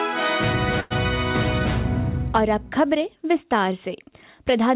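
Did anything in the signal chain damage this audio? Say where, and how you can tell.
Yes. A call audio freeze at 0.8 to 0.92 s: the sound stalls into a fading buzz, then resumes intact. Late packets likely emptied the jitter buffer.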